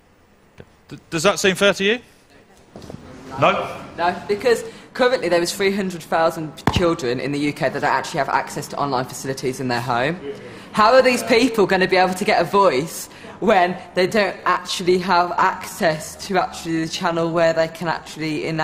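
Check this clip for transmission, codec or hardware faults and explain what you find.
One fault appears: a time-stretched section running from 13.83 s to the end at 18.64 s. There the pace drops abruptly to about 0.74 times normal speed while the pitch stays put. The likely cause is software lengthening that stretch to fit a duration and repeating short pieces to preserve pitch. On a spectrogram, horizontal bands keep their frequencies but each event spreads wider in time. The waveform's envelopes grow correspondingly longer and more widely spaced.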